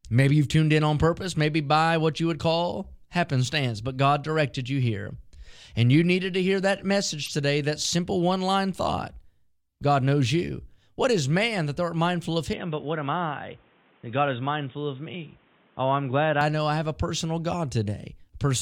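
At 7.23 to 7.28 s, between "needed to hear that" and "today that simple one", a corrupt frame was decoded: a couple of damaged frames produce a brief glitch peaking around -20 dBFS, with misplaced spectral energy rather than a click.

From 12.53 to 16.41 s, after "thou art mindful of" until "know I have a", the sound abruptly turns boxy and dull, with nothing above 3.8 kHz and a faint new noise floor. This is likely an input switched to a poorer device. There is no gap and no level jump, and it recovers abruptly.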